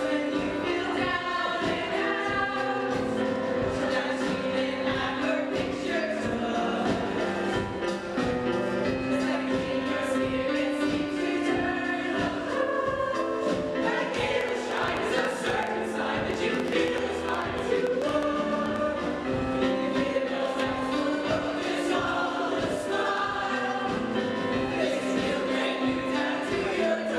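From 14.41 to 18.77 s a train of clicks runs over the sound, about 7.4 per second at an uneven pace. There are roughly thirty of them. Each pops out about 15 dB above the signal. They are similar pulses, likely from interference or a faulty connection.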